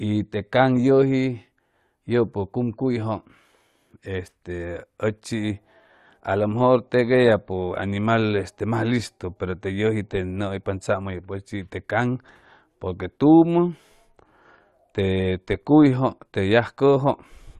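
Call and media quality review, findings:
No audible faults found in the speech recording.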